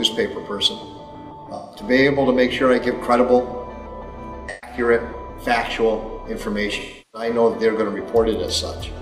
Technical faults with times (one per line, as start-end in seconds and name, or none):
1.54-1.82 AAC frame loss with concealment
4.49-4.77 AAC frame loss with concealment
6.79-7.29 AAC frame loss with concealment